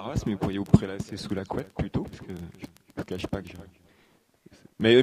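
No technical faults are audible anywhere in this audio.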